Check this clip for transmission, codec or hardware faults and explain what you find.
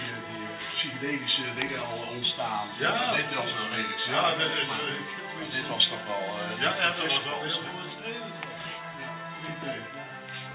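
Nothing turns up that counts as a fault: the sound has come through a call path whose narrowband limit leaves nothing above 4 kHz, which fits a G.711 mu-law codec at 64 kbps doing its normal job.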